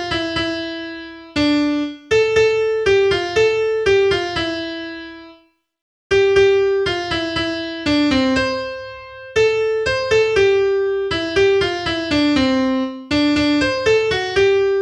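No technical faults can be heard anywhere in the audio; the signal holds steady throughout.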